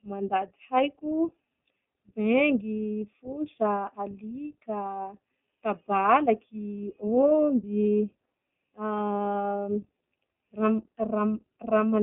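Throughout the speech, the iLBC codec shapes the sound. The line band runs from about 200 Hz to 3.6 kHz, and nothing reaches above 3.8 kHz, so sibilants lose their edge and the voice sounds boxed in. Each frame's excitation is coded on its own, which gives a plainly audible rough, slightly synthetic grain. The texture points to 20 ms frames and fits the 15.2 kbps mode.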